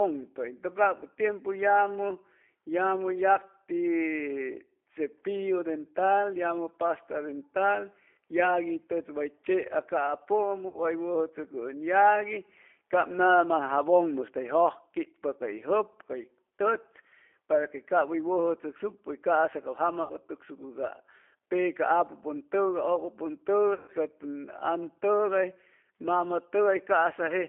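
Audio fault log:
Throughout: G.729 codec. Speech is held to a 300 Hz to 3.5 kHz band and rebuilt from a vocal-tract filter and sparse pulses, which fits an 8 kbit/s coder and gives a plainly rough, synthetic edge.
10.68 to 10.83 s, 20.03 to 20.13 s (just after "ca'sa cap jama"), 23.74 to 23.91 s: VoIP packet loss concealed by the speech codec. 60 ms, 60 ms and 140 ms of lost audio are filled by extrapolating the last pitch and filter at falling gain. Each gap becomes a fading buzzy tone or coloured noise, and the voice stays weak briefly after packets resume.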